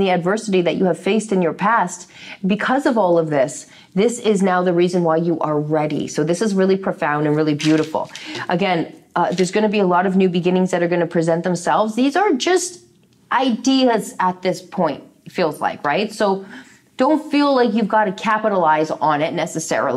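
Nothing stood out as a technical fault on listening.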